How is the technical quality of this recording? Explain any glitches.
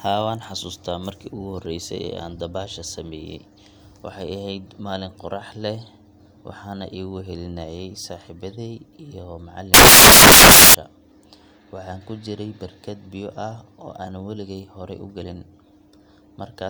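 One glitch stands out. From 9.74 to 10.74 s the speech turns into loud, harsh broadband noise: samples built from the wrong bytes, with fast-changing low bits misread as each value's large part.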